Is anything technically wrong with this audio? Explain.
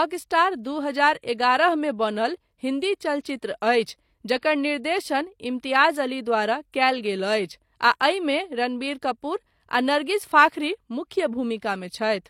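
Yes. Pre-echo appears before three sharp attacks in this speech, at 0.63 s, from 3.21 to 3.25 s, and from 4.38 to 4.43 s. The codec spread its block noise backward, so a brief hiss of 16, 39 and 53 ms leads each attack, which sounds smeared.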